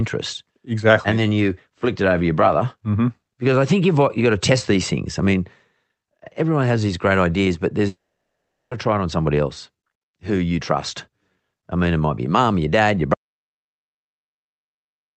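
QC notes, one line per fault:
7.87–8.74 s, long network dropout: audio likely stopped arriving, so the last sound smears into a fading buzz, then 0.75 s of blank spectrogram.
13.14 s to end, audio dropout to silence: input likely lost; sound cuts off and the gap is silent with no room tone left.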